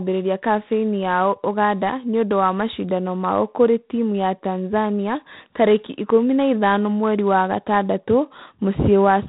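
Speech with G.726 ADPCM coding throughout, at 24 kbit/s: a rasping hiss rides the voice's level, and a spectrogram shows nothing above 3.9 kHz, with grainy noise filling speech bands.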